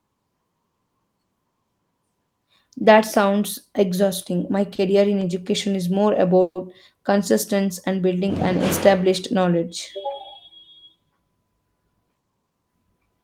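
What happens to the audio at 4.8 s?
A short stall from a late packet occurs between 4.75 and 4.81 s. A packet arrived late, the jitter buffer ran dry, and the receiver stretched the preceding speech by about 30 ms before resuming where it left off. Nothing is lost, but one sound lingers slightly with a faint buzzy dip, and everything after it runs 30 ms later.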